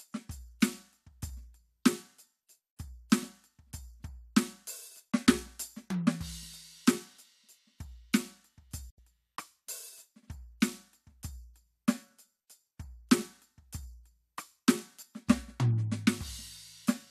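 The receiver lost frames and muted this music at 8.90–8.99 s, a digital broadcast dropout: an 8 ms fade, then 72 ms of silence.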